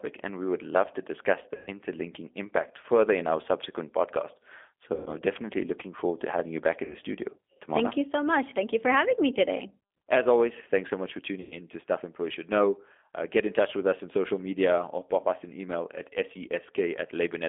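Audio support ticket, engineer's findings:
G.729 codec throughout: narrowband, rough, slightly synthetic speech. Spectrogram shows energy confined to roughly 250 Hz to 3.5 kHz with an empty band above. Consistent with 8 kbit/s G.729A. Pulse-excited synthesis of vocal tract and pitch causes the graininess.

VoIP packet loss concealed by the speech codec at 1.55–1.68 s (after "would love to discuss"), 4.94–5.10 s (after "in our subsequent podcast"), 6.84–6.95 s (before "studio tomorrow") and 11.41–11.56 s. About 60–120 ms lost each time. Decoder repeats last pitch and filter with falling gain: buzzy tone or coloured noise that fades, smeared harmonics on spectrogram, decaying envelope on waveform, weak recovery afterwards.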